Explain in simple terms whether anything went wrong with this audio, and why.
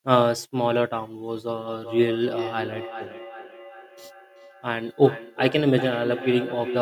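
Something did go wrong. From about 1.6 s to the end, the speech has a feedback echo between two devices. Two gadgets in the same room are on one call, so one plays back what the other's microphone sent, and that microphone hears it again. Each device's echo cancelling only removes its own playback, so this loop slips through. You hear each word come back roughly every 0.4 s, quieter than the speech.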